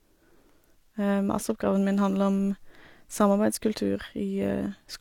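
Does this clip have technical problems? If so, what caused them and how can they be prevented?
Yes. A spectrogram shows a hard ceiling at 18.5 kHz and smeared artefacts throughout, likely low-bitrate audio saved at a high bitrate. Re-encode only from the original source.

From 0.12 s onward, clock slip clicks tick about every 30 ms as thin waveform spikes, likely from unsynchronised device clocks. Lock both devices to one clock.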